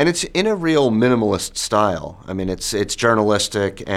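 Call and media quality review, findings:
No faults found in this clip. Nothing to attribute to any component, so no findings are logged.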